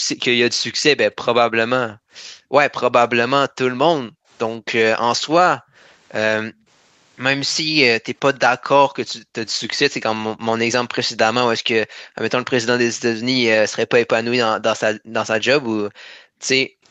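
From the very start, 0.0 to 0.08 s, the room background is pulled down by about 40 dB: background gated by the echo canceller. While far-end audio is playing out of the loudspeaker, the canceller suppresses the microphone hard, so the ambience drops out and then returns when suppression releases. The same gating recurs at 1.88 to 2.53 s (about 35 dB), 4.0 to 4.29 s and 5.57 to 6.67 s (both about 40 dB).

Between 7.5 and 8.39 s a faint delayed copy of the speech trails the original by 144 ms, roughly 40 dB below it. This is likely an echo leak: the far end's canceller failed to remove all of the loudspeaker sound its microphone picked up, and the residue was sent back down the line.

Gating returns at 9.23 to 9.34 s (about 30 dB), 11.87 to 12.08 s (about 40 dB), and for the longest stretch at 14.97 to 16.83 s, again about 40 dB deep. These are brief holes in the room tone rather than one continuous cut.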